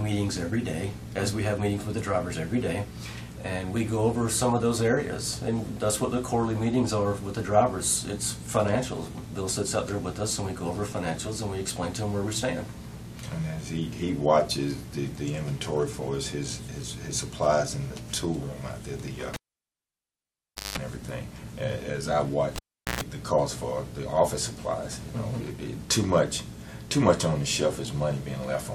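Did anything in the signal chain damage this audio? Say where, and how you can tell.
Yes, at the analogue wiring stage: a cable was pulled and plugged in twice. At 19.34 s a pop is followed by near silence lasting about 1.39 s, then a 188 ms burst of 50 Hz mains buzz and a second pop as the sound returns at 20.78 s. The same sequence repeats at 22.56 s, with about 0.40 s of dropout and a 118 ms buzz at 60 Hz before it ends at 23.01 s.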